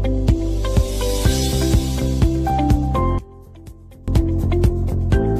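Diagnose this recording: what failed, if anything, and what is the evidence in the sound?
From 3.18 to 4.08 s the sound collapses by about 22 dB, leaving a faint residue before snapping back. That's the signature of one channel inverted, likely a polarity flip in the analogue wiring, so the shared centre content cancels when the channels sum to mono.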